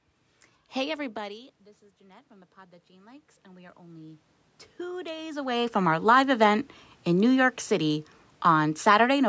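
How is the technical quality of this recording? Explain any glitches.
The main glitch is a slow automatic gain rise. From 0.82 s to 6.58 s the speech and the room noise behind it swell together, climbing steadily rather than jumping. Around 1 s the talker seems to move back from the microphone, and the input falls by about 17 dB. The call's automatic gain control reads that as too quiet and raises its gain by about 11 dB over several seconds, lifting the background along with the voice. A further shift in distance near 5 s is part of the talker's movement rather than the system. The call microphone processing leaves nothing above 8 kHz.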